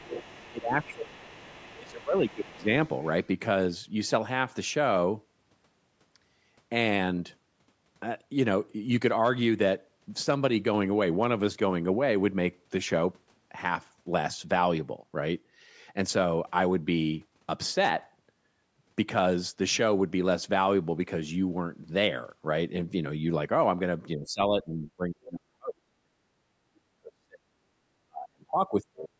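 From 0.00 to 0.48 s a faint second voice sits roughly 15 dB under the talker. It comes back, around 25 dB down, from 1.23 to 3.27 s. This is the other side's voice leaking through, likely loudspeaker echo that the echo canceller failed to strip from the microphone.

Overlapping that, the talker's speech briefly dips by about 20 dB between 0.01 and 0.12 s. From 0.46 to 2.67 s it sags by up to around 25 dB. The same speech suppressed in double talk returns much harder from 24.16 to 27.41 s and from 28.03 to 29.11 s, where stretches drop by about 40 dB. Both sides were likely talking at once, so the canceller could not tell the talker from the echo and turned both down.

Between 27.69 and 27.75 s the room sound ducks by about 20 dB and then recovers. This is background gated by the echo canceller: while the loudspeaker was playing, the canceller clamped the microphone down and released it a moment later.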